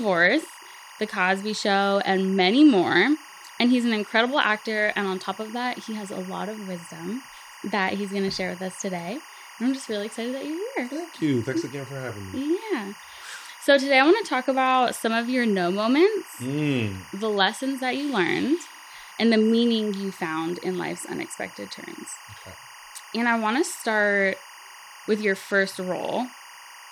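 Linear timecode running at 24 frames per second has leaked from a neighbouring track or cable into this speech recording, so timecode bleed sits under the whole clip from start to finish. The code's square wave flips between tones near 1 kHz and 2 kHz, and it lands roughly 20 dB below the speech. It comes through as a constant, busy chirping warble riding behind the talking, never pausing between phrases.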